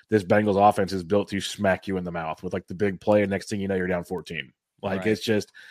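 At 3.12 s and again at 4.18 s, a bit error spike cuts through the speech as a single hard tick. A flipped bit knocked the stored value off by a power of two and it snapped straight back, briefly over a few samples at 3.12 s and apparently for one sample at 4.18 s, peaking around -23 dBFS and -29 dBFS. On a waveform each is a lone vertical needle; a spectrogram shows a thin full-height stripe unrelated to the speech.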